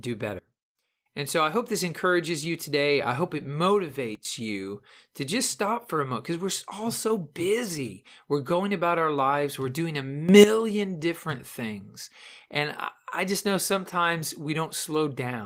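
Speech clip with three sudden gain jumps, with sound and background stepping together: down about 21 dB from 0.39 to 1.06 s before "and so I hope", down about 14 dB from 4.15 to 4.25 s before "you to just stop", and up about 12 dB from 10.29 to 10.44 s between "doing a" and "different things". The likely cause is digital gain applied without a ramp.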